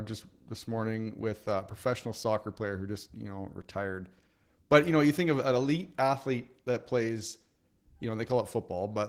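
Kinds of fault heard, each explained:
Opus voice compression: The speech runs through a low-rate voice coder from start to finish. The damage is plainly audible and fits roughly 16 kbps in hybrid mode. The lower band is coded by linear prediction, and a transform layer handles content above 8 kHz. The full band is kept, so the top end is not simply cut off. The excitation is coded coarsely, which gives the voice a hoarse, slightly robotic edge. The coding works in 20 ms frames.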